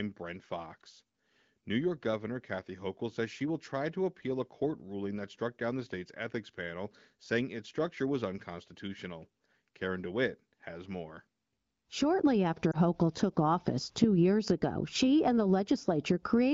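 At 12.71 to 12.76 s, a single lost AMR speech frame causes a brief dip or warble. The AMR-WB decoder concealed the 20 ms gap by reusing the previous frame's pitch and vocal tract settings at reduced gain. Unlike a hard dropout, there is no click or silent hole.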